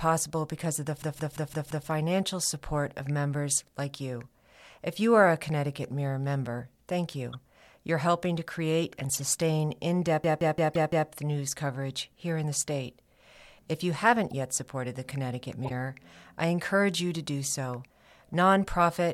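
At 1.02 to 1.88 s and again at 10.24 to 11.09 s, a system hang loop repeats one 0.17 s slice five times, a stutter at about 5.9 Hz consistent with an 8192-sample ring buffer. Corrupt frames decoded from damaged bits give short noisy chirps at 7.32, 9.10, 10.74, 14.30 and 15.64 s. The one at 9.10 s is loudest.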